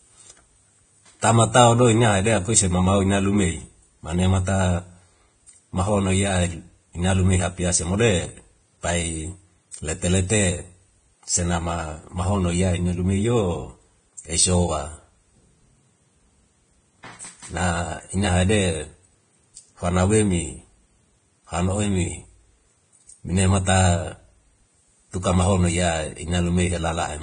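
From start to finish the speech sounds hissy and grainy, with nothing above about 9.7 kHz, roughened tones and smeared consonant attacks. That's likely heavy Vorbis compression: the treble gets quantised so coarsely that detail turns into noise, which fits a bitrate around 23 kbps.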